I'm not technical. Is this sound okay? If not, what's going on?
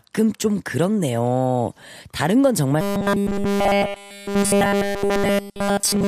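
No. From about 2.81 seconds until the end, the speech turns into robotic sound from repeated short buffers. It becomes a stiff, metallic buzz at a steady 200 Hz. That rate matches a tiny slice of sound, about 5 ms long, played over and over. The likely cause is new audio arriving too slowly. The software fills each gap by repeating the last slice. That whole stretch is repeats, and the real speech is skipped.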